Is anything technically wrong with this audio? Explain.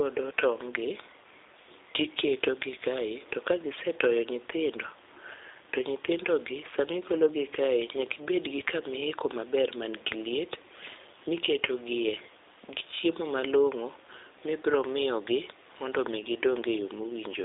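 Yes. Throughout the speech there is G.729 codec coding, with plainly audible damage. The sound is confined to a telephone band of roughly 300 Hz to 3.7 kHz, with nothing above 3.8 kHz. The coder models each 10 ms frame as a vocal-tract filter, a pitch predictor and a few pulses rather than the actual waveform. The speech stays intelligible but comes across as narrow, rough and slightly synthetic, which fits a low-rate 8 kbit/s stream.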